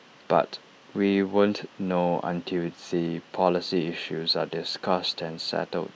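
Nothing goes wrong anywhere in this bit of speech, so there's no fault to point to at any moment.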